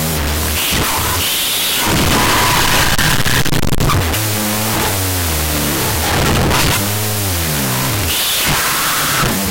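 A wrong sample width affects this speech clip from start to finish. Audio written as 16-bit integers is being read back as unsigned 8-bit values, so every stored sample is split into two. The high byte of each pair still carries the top bits of the real waveform, but the low byte comes out as essentially random values. The result is loud, harsh noise with the speech buried inside it. Because each original sample becomes two, the audio plays at half speed and about an octave low.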